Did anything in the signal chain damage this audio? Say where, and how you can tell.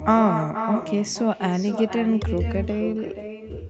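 Yes. The damage is an echo with no canceller, present from start to end of this speech clip. Every phrase is followed, roughly half a second later, by a copy about 8 dB quieter that sounds thinner. That pattern means the far end played the call through a loudspeaker, its microphone captured it, and no echo cancellation removed it, so the signal returned after a network round trip. The 8 kHz top end is simply the call codec's normal bandwidth.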